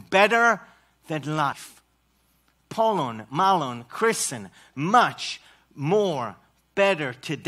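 A brief glitch cuts through the speech from 1.51 to 1.53 s, caused by damaged data in the compressed stream that knocked the decoder out of sync.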